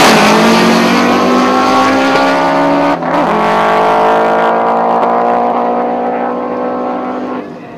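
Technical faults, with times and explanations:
Throughout: hard clipping. The signal was driven about 5 dB beyond what a stage in the chain could pass, so around 3 percent of samples had their peaks sliced flat. Those flattened tops add high harmonics, heard as crackle on the loudest moments.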